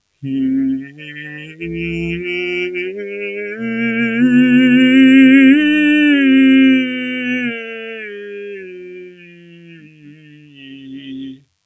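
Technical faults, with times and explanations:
throughout: DECT cordless phone buzz. A thin, steady buzz sits well under the music, pulsing at 100 Hz with lots of harmonics. That's a DECT handset or base nearby sending a radio burst every 10 ms, which the audio circuitry rectifies into sound.
throughout: noise suppressor applied to music or sounds. A speech-oriented suppressor was left on. It treats sustained tones, ambience and reverb as noise, so the level keeps pumping over a swing of roughly 20 dB while attacks slip through and held parts sag.
0.80–1.62 s and 8.86–11.54 s: sound cut by the noise suppressor. Here the suppressor clamps down harder, dropping the music by about 13 dB at worst. Sustained and decaying material gets pulled under and tails are cut short, so these stretches sound hollow and thinned out.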